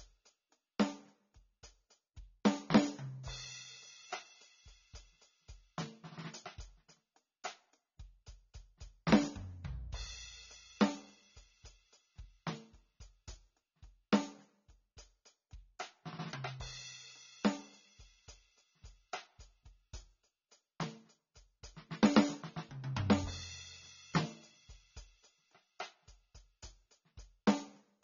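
AAC compression, throughout the clip: the music has nothing above 7 kHz and sounds dull and smeared, with a warbling, fizzy texture on sustained tones. This is likely AAC-LC coding at a low bitrate, around 24 kbps, where the encoder drops the highs and coarsely quantises the remaining bands.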